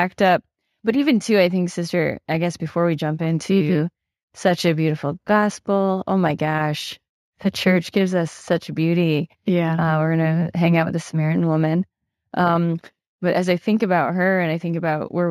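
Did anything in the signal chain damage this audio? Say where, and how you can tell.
Yes. Imaging from linear upsampling runs through the whole speech clip, introduced at sample-rate conversion. The band stops near 8 kHz, pointing to a 16 kHz source raised to 44.1 kHz. The converter joined samples with straight lines, a weak interpolation filter, so the top of the band is dulled and a mirrored copy of the spectrum sits between 8 and 16 kHz, roughly 35 dB down. That image is the faint metallic shimmer on sibilants.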